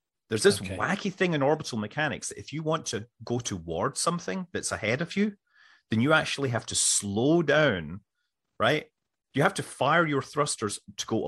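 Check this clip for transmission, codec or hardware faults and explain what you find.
No faults found: the speech holds steady throughout with nothing to flag.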